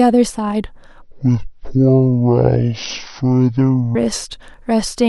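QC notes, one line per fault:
1.02–3.95 s, section at the wrong speed: the speech abruptly drops to a deep, dragging register, roughly ten semitones below the surrounding audio, with every syllable stretched to nearly twice its length, then snaps back to normal at 3.95 s. Because pitch and tempo fall together, this is likely a playback-rate mismatch, with the section running at 0.536× speed, as if it were clocked against the wrong sample rate.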